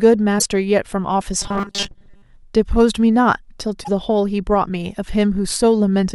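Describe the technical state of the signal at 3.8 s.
Damaged data in a compressed stream from 3.80 to 3.89 s: corrupted frames make the decoder lose sync and resynchronise, producing a brief garbled burst in the speech.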